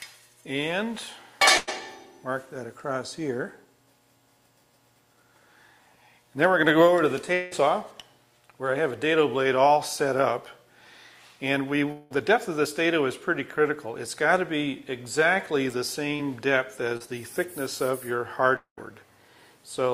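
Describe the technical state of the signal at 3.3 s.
At 3.3 s the signal is intact, with no audible technical fault at that point.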